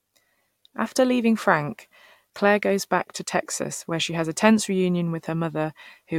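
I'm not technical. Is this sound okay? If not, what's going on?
Yes, nothing in this speech recording points to a technical fault.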